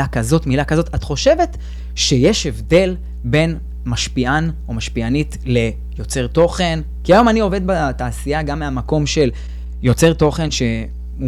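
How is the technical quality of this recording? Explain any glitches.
The recording has one clear technical fault. Throughout the speech there is mains hum: a steady 60 Hz tone with low harmonics, fairly prominent at roughly 10 dB below the signal, from power-line coupling through a ground loop or nearby transformer.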